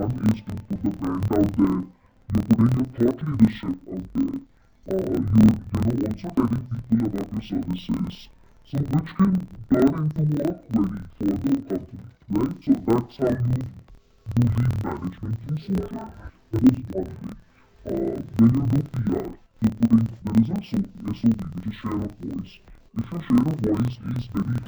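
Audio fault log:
throughout: interleaved audio read as planar. Alternating left and right samples are split into halves of each 26.12 ms block. Both halves play at half speed, so the sound drops an octave, doubles and chops at the 38.3 Hz block rate.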